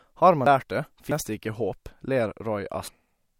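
Capture buffers were likely overwritten before being read, a dropped buffer (overrun) at 0.46 s, 1.12 s just before "det ikke håp", and 2.88 s. Each splices the speech with a forward jump, losing about a third, a tenth and a third of a second.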